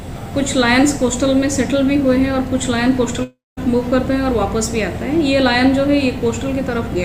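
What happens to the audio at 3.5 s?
At 3.5 s the audio is inside a long network dropout running from 3.23 to 3.59 s. The last sound is stretched into a fading buzz that decays to about 200 ms of silence, likely from a stalled stream, and unlike a brief glitch, resumes with a third of a second gone.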